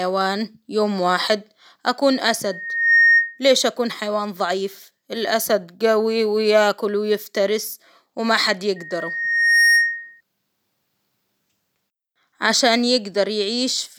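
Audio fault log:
2.45–3.40 s and 8.76–10.21 s, loudspeaker feedback squeal: a single tone at 1.9 kHz rises out of the speech, taking about half a second to build the first time and about a second the second time, and settles at roughly 5 dB above the speech before stopping. The microphone is picking up its own loudspeaker, and at 1.9 kHz the loop gain exceeds unity, so that frequency keeps reinforcing itself until the loop is broken.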